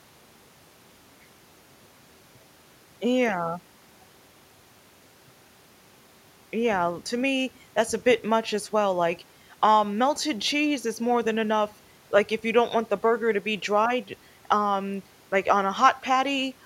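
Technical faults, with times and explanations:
No technical faults can be heard anywhere in this speech clip. Nothing calls for a time or an explanation.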